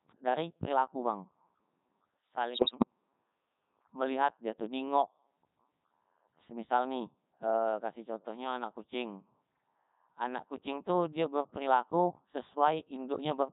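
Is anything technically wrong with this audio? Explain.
Yes. Throughout the clip the speech passes through the Codec 2 vocoder at 3.2 kbit/s, and the damage is heavy. Codec 2 sends only pitch, voicing, energy and a rough spectral envelope, then rebuilds the voice from sine waves, so the sound is robotic and buzzy. Unlike a waveform codec starved of bits, which smears and goes watery, this sounds synthetic.

From 2.54 to 2.85 s there are bit errors on digital voice radio. Flipped bits, at a rate of very roughly 7 percent, corrupt the frame parameters across a stretch that fits about a dozen frames. Pitch, level and tone colour jump into bleeps and warbling gibberish. Packet loss would leave gaps or repeats instead.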